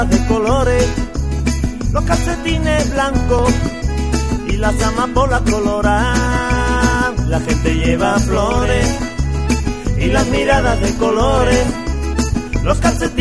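Nothing is technically wrong with the audio; no faults can be heard anywhere in it.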